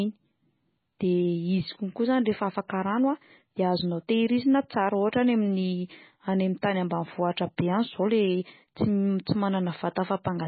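From start to finish the speech carries heavy MP3 compression damage, likely from encoding at a very low bitrate, which fits a setting around 16 kbps. Nothing survives above 4.5 kHz, so the top end is cut off flat and s sounds lose their bite. With so few bits available, the encoder drops quiet frequency components that flicker in and out between frames, giving the voice a watery, swirling texture, and consonant onsets sound smeared.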